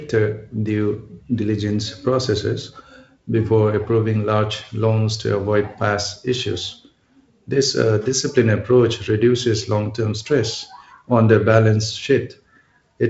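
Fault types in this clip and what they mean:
No faults are present in this speech clip.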